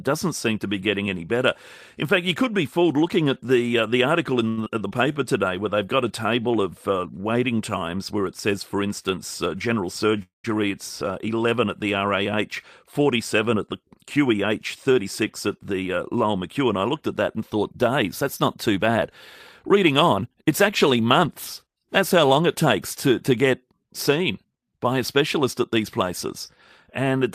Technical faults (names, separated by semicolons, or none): short stall from a late packet; short concealed packet loss; jitter buffer slow-down; jitter buffer speed-up; call audio freeze